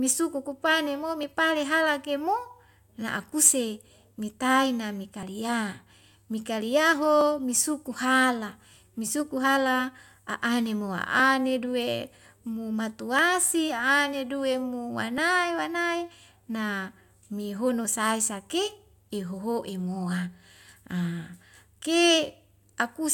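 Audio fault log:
1.23, 5.23, 7.21, 9.20, 11.19, 13.19–13.21 and 15.18 s, overlap between stream segments: adjacent 2-second segments carry overlapping time stamps, so the player discards roughly 9 to 20 ms of real speech at each of these seams, and the waveform jumps, heard as a brief click or skip.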